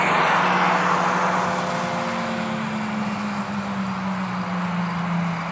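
Nothing goes wrong anywhere in the clip; it simply has the band-limited sound of a normal call, with nothing above about 8 kHz, which fits a wideband codec such as G.722.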